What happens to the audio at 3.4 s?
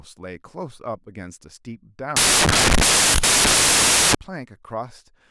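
At 3.4 s you're right in the middle of a stretch, from 2.16 to 4.15 s, where the samples are built from the wrong bytes. The reader misassembles each sample, so the jittery low bits land in the high end, and the speech turns into loud, harsh broadband noise.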